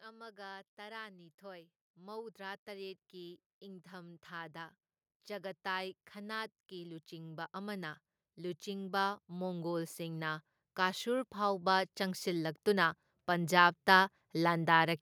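From 0.05 s to 14.62 s, the level climbs steadily. This is automatic gain rising. The gain control judged the incoming speech too quiet and kept pushing its gain up, by about 26 dB in total. The change is slow, spread over almost the whole clip. The voice and the background noise grow louder together. The background swells in step with the speech, so the noise floor is clearly higher by the end.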